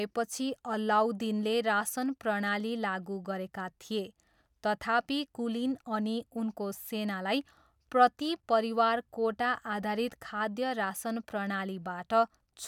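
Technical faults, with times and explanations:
Nothing stood out on listening to this speech recording.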